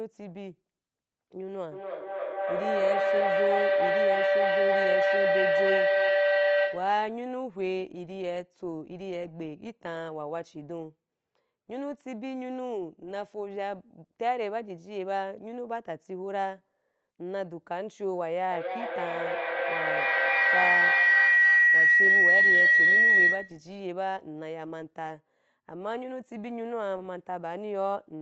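From 1.72 to 7.1 s and 18.51 to 23.72 s, a feedback howl grows as the mic-to-speaker loop gains each pass. It sits near 500 Hz, then about 2 kHz, pulsing roughly every 300 ms and peaking about 7 and 11 dB above the speech. On a spectrogram it shows as a bright horizontal line, and on the waveform as a swelling envelope.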